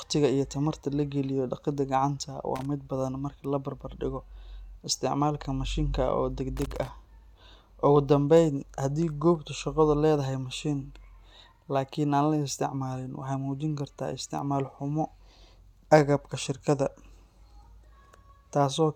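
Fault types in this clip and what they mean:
Loose connector crackle: A worn or dirty contact in the signal path is making and breaking as it shifts, chopping the speech. Here it comes as two irregular bursts of scratchy crackle, a short one at 2.56 s and a longer one from 6.57 to 6.88 s.
Bit error spike: A single flipped bit in memory or on a digital link throws one sample off its true value by a power of two before it snaps straight back. Each is heard as one sharp, broadband tick unrelated to the speech, at 3.45 s between "badan marka" and "la barbar dhigo", and again at 14.39 s.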